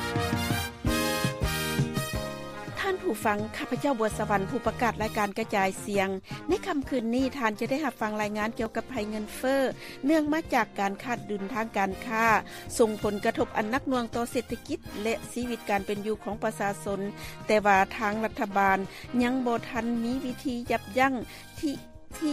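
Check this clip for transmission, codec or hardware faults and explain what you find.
Six sharp clicks stand out, at 6.99, 8.66, 13.85, 15.97, 17.18 and 20.85 s. Each is a single tick, likely from dropped samples. Under a millisecond of signal goes missing, so the waveform jumps abruptly to a later value.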